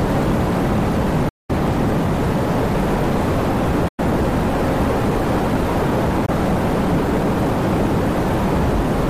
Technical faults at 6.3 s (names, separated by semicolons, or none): Bluetooth dropout